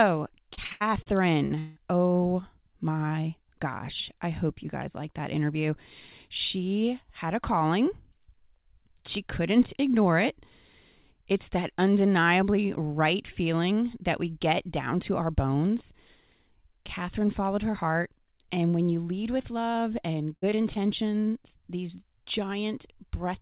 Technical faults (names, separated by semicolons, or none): repeated packet loss (robotic sound); short concealed packet loss; long network dropout